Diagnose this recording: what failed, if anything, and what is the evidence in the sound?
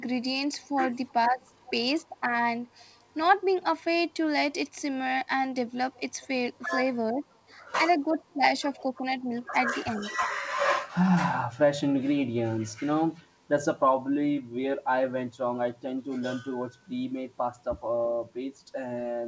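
A faint delayed copy of the speech trails it at 0.58–1.72 s, 5.97–6.25 s, 8.32–9.22 s and 10.13–10.27 s, lagging by roughly a third of a second and sitting about 15 to 30 dB below the direct speech. This is echo leak in call processing, likely from a far-end loudspeaker whose echo canceller let residual pickup pass back.

Between 0.76 and 1.69 s, and again between 6.62 and 10.35 s, the speech briefly dips, by up to about 20 dB, in short bites that overlap the echo bursts. This is speech suppressed in double talk, likely the echo canceller attenuating everything while it could not separate the talker from the loudspeaker echo.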